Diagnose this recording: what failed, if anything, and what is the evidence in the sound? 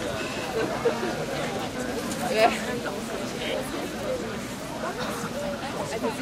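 Codec stage: compressed frames were skipped, so the sound jumps ahead about 100 ms at 1.74 s and 300 ms at 2.87 s.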